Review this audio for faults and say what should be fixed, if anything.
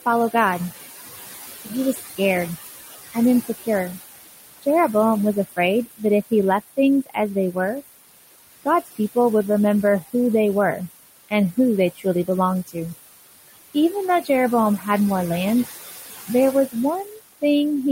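Noise suppressor artifacts run through the whole clip. The suppressor pulls down every band it classes as steady noise by about 16 dB, frame by frame, so the room noise, which sits about 12 dB under the speech, drops away in pauses and swells back beneath each phrase. Easing the attenuation depth and smoothing its gain changes over time would keep the residual noise steadier and less watery.

Speech cut by the noise suppressor occurs at 1.65–2.19 s, 3.12–3.68 s, 4.62–7.56 s, 8.64–9.16 s just before "would remember who they", 11.29–12.76 s right after "remember who they were", 13.74–14.86 s leading into "more land", and 16.28–17.43 s. In each span the suppressor mistakes low-level speech for noise and drops it by about 11 to 20 dB, deepest around 11.3–12.8 s. Only brief portions, roughly a tenth to a third of a second per span, are hit, so soft consonants and word endings come out swallowed or faint. 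A less aggressive suppression threshold, with some protection for low-level speech, would keep quiet speech above the suppressor's noise decision.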